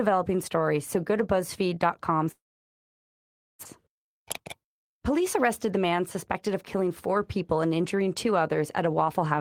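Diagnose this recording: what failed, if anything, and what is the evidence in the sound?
At 2.31 s the speech collapses into a fading buzz, then near-silence, and resumes at 3.67 s with about a second of audio simply gone. The likely cause is a long network dropout: the receiver stretched the last sound, then went quiet until packets returned.

From 3.74 to 7.67 s, ending just before "injuring two", the speech sounds hurried at unchanged pitch, running at 107% speed. This is a jitter buffer speed-up at the network receiver. After the gap, surplus buffered audio was trimmed by repeatedly cutting short pieces of one or a few pitch periods, shedding around a third of a second.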